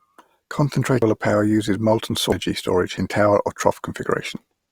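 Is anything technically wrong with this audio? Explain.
Yes. The speech skips forward abruptly four times, at 1.02, 2.32, 2.97 and 4.37 s. Each skip is a jump with no silence. The first falls just before "power uses molten", the second just after it. The likely cause is a dropped buffer (overrun): samples were overwritten before being read, and the remaining audio was butted together. Roughly a third of a second disappears at each of the first two, a tenth at 2.97 s, and a fifth at 4.37 s.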